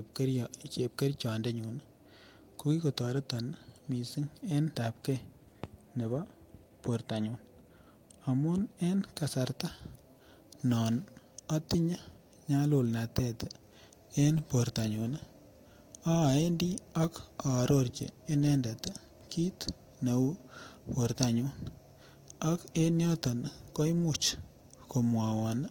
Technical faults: jitter buffer speed-up

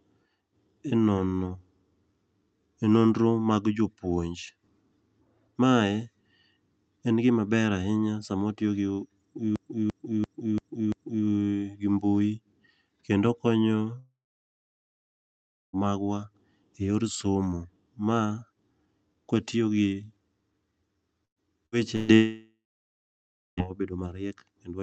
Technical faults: system hang loop; long network dropout; burst of packet loss

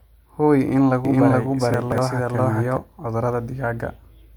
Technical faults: doubled audio track; chunks out of order

